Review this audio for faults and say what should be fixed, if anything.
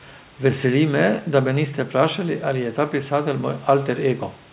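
Nothing here needs fixing: the speech came over a narrowband call link that keeps nothing above 4 kHz, which points to G.711 A-law at 64 kbps, and the room noise sits about 31 dB below the talking, both exactly what you'd expect from that setup.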